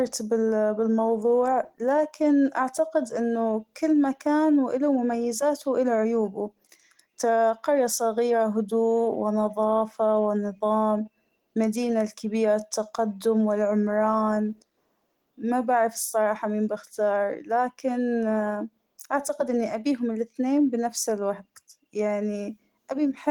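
No technical faults can be heard anywhere in this speech recording.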